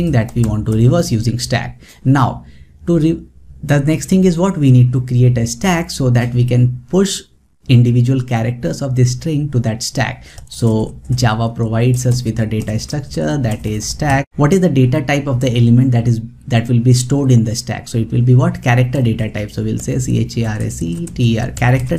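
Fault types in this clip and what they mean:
Nothing stood out on listening to this audio.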